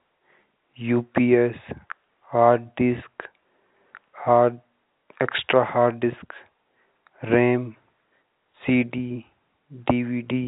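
No technical fault can be heard in the speech; it carries the narrow band of G.711 telephone coding, with nothing above about 3.8 kHz and at most a faint trace of the format's level-following noise.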